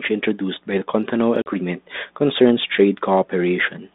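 Speech over a G.726 ADPCM line at 32 kbit/s, band-limited to about 150 Hz to 3.7 kHz, with one instance of packet loss on an ADPCM call at 1.42 to 1.49 s. A hard-edged gap of roughly 40 ms, about two packets, drops to silence. The decoder's adaptive predictor and step size then no longer match the sender's, so the sound resumes with brief, slight distortion before it settles.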